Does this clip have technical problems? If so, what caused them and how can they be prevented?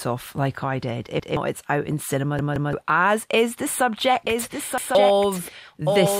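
Yes. Audio arrived late for the device three times, so it replayed its last buffer: at 1.20 to 1.37 s once, at 2.39 to 2.73 s twice, and at 4.78 to 4.95 s once. Each piece lasts about 171 ms, which fits an 8192-sample buffer. The result is an audible stutter with hard joins, and the replay stands in for roughly 150 ms of lost audio each time (around 300 ms at 2.39 s). A larger playback buffer or more reliable data delivery prevents this repeated buffer fault.

At 1.93 to 2.02 s, weak DAB reception let bit errors, at a rate of around a third of a percent, slip past error correction into the MP2 data. Corrupted samples produce short blips of noise in single sub-bands, a brief DAB burbling. Better antenna placement or a stronger signal prevents it.

From 4.27 s to the end, a doubled audio track appears. The likely cause is a second, slower capture path mixing the same sound in again. A full-band copy about 5 dB quieter trails roughly one second behind, with an abrupt onset. 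Routing the source through only one path prevents it.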